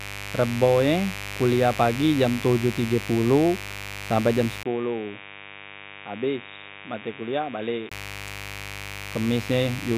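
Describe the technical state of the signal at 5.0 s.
At 5.0 s the speech sits inside a stretch from 4.63 s to 7.91 s, just after "tige poloh sampe jam", where the sound turns dull and boxy with nothing above 3.8 kHz, drops roughly 10 dB in level and carries a faint new noise floor. The likely cause is an input switched to a poorer device, and a 20 ms gap at the switch marks the join. A steady equaliser or low-pass fault would not come with its own noise and level step.

Mains buzz also runs under the speech at this moment, as it does throughout. Sharp switching spikes on the 50 Hz supply, twice per cycle, produce harmonics reaching several kilohertz, heard as a fairly prominent raspy buzz. A clean hum would be a smooth low tone, not this gritty edge.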